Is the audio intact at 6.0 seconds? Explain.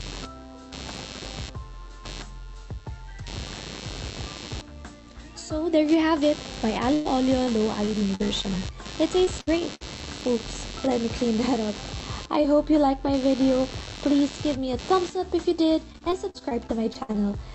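No. At 6.0 seconds, computer activity noise is present, as it is throughout the clip. Load swings in the processor, graphics card or mouse disturb the ground shared with the audio circuit. This leaks in as a buzzy, scratchy texture pulsing at around 100 Hz. It sits roughly 15 dB below the wanted sound. It follows the computer's activity, not the audio. The call codec's top end, stopping near 8 kHz, does not mask it.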